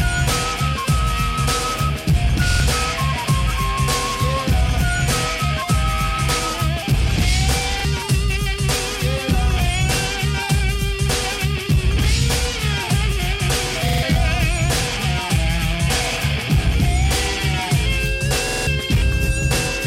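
At 2.51, 7.80, 13.89 and 18.48 s, a repeated buffer stutters. Late audio made the device replay its last 46 ms block two, one, three and four extra times. That fits a 2048-sample buffer. Each repeat joins hard, and up to about 200 ms is skipped.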